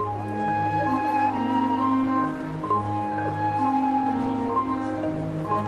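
No technical faults can be heard anywhere in the signal.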